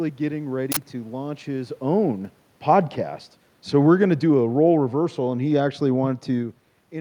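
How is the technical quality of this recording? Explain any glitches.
The recording has two technical faults: a burst of digital noise near the start and a gradual drop in level in the second half.

From 0.72 to 0.77 s, just before "to launch his own", an uninitialised buffer plays. A block of about 46 ms, which fits a 2048-sample buffer, went out before audio filled it, so stale memory was heard as a harsh, loud burst. On a waveform it is a dense block; on a spectrogram, a broadband vertical slab.

From 3.74 to 6.27 s, after "launch his own podcast", automatic gain falling pulls the level down by about 4 dB. The gain control judged the input too loud, or its background noise too strong, and backed off slowly, so the speech and the room noise beneath it sink together. The waveform envelope tapers steadily, and the spectrogram's whole background darkens uniformly, unlike the separate level shift near 6.5 s where the talker moves.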